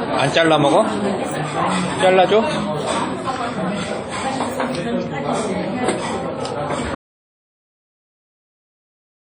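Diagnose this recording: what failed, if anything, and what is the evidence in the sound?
Codec stage: the whole clip has a washy, ringing smear, with hiss that swells and sinks with the sound itself. That's heavy transform-codec damage, likely from WMA compression at a low rate, around 32 kbps, where long blocks spread quantisation noise and weak components get zeroed.

Capture or input stage: at 6.95 s the sound cuts off dead and stays that way to the end, with no room tone at all, just silence. That's an audio dropout to silence, likely the input being lost while the recorder kept writing zeros.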